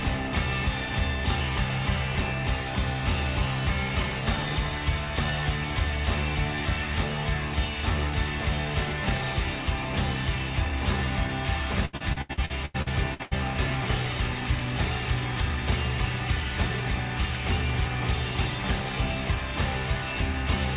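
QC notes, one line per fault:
11.85 to 13.34 s, repeated packet loss (robotic sound): the sound turns choppy, with short pieces dropping out in quick succession. About ten gaps, the longest 86 ms, were patched by stretching the preceding sound, so roughly a third of this stretch (557 ms) is synthetic fill rather than real audio. Over the call path, nothing above 4 kHz survives (consistent with G.711 A-law at 64 kbps).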